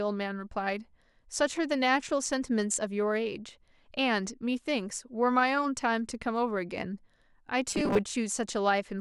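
Speech clip. From 7.70 to 8.02 s, robotic sound from repeated short buffers gives a metallic 200 Hz buzz, likely from a 5 ms buffer replayed for roughly two fifths of the audio.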